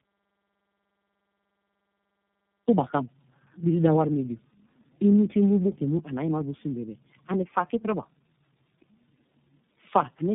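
Throughout this speech clip, tandem speech coding is audible: nothing above 3.7 kHz, with roughness and warble stacked beyond what one low-rate coder gives, consistent with three speech codecs in a row (AMR-NB, G.729A, then iLBC) each re-encoding the previous one's degraded output.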